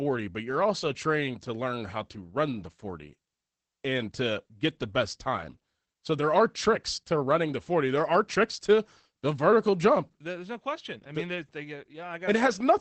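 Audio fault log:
throughout: Opus voice compression. The speech has the muffled, slightly hoarse, faintly robotic quality of the SILK linear-prediction coder running short on bits, and the damage is plainly audible. Nothing is left above about 8.6 kHz, so the wideband cutoff takes the air off the consonants, while the coarse excitation coding gives voiced sounds that rough, buzzy edge. The overall character fits a bitrate of around 12 kbps.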